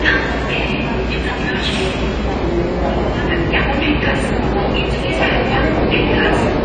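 Throughout, the sound is dull and smeared, likely from AAC compression at a low bitrate near 24 kbps; a spectrogram shows nothing above 9.2 kHz.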